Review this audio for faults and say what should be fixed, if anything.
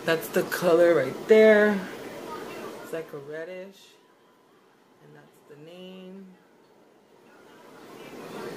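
Nothing here needs fixing; no faults were heard.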